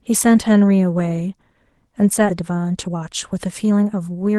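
At 2.29 to 2.31 s there is a skip ahead. Roughly 0.7 s of speech was thrown away while later audio was already queued. Nothing fills the hole. The speech on either side is butted together, so the sentence jumps abruptly.

From 2.41 s to the end comes a jitter buffer speed-up. The buffer was holding too much audio, so the receiver kept trimming tiny pitch-period slices, about a third of a second in total. Speech runs at 114% speed with unchanged pitch and sounds rushed.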